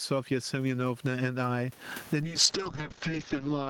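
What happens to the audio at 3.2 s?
By 3.2 s you're inside a call bitrate drop that starts at 2.22 s and runs to the end. The encoder got squeezed from about 40 kbps down to 9 kbps, coding much more coarsely and cutting the top end from 20 kHz to about 6 kHz, so the speech sounds muffled and watery.

You'll also hear gain pumping, which runs through the whole clip. The room background sits well below the speech, and the gain swings around 20 dB. The likely cause is gain set far too high with a fast limiter clamping down on every peak, leaving the speech squashed.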